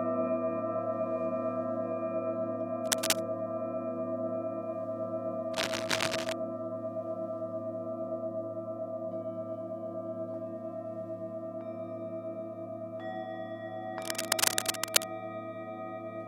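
Cable scratch noise at 2.84–3.22 s, 5.53–6.33 s and 14.02–15.04 s: dense, uneven rustling bursts, at or slightly above the sound, likely from a worn connector being moved, unlike isolated clicks.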